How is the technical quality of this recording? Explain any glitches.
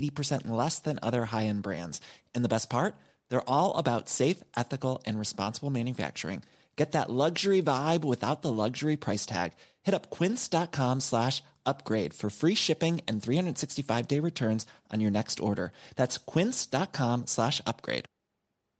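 There are no glitches to explain: the speech has the band-limited character of a WebRTC call path, with nothing above 8 kHz, which fits call microphone processing followed by an Opus codec at around 20 kbps, and no faults can be heard anywhere in it.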